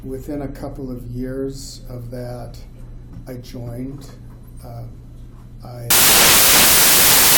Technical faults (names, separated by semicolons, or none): samples built from the wrong bytes